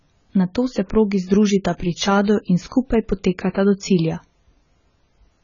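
From start to finish, the speech has nothing above 7 kHz and sounds dull and smeared, with a warbling, fizzy texture on sustained vowels and sibilants. This points to heavy AAC compression, likely AAC-LC at a low bitrate, consistent with something near 16 kbps. With so few bits per frame, the encoder lowers its cut-off and starves the upper bands, leaving gaps or noise-filled regions in the spectrum that swirl from frame to frame.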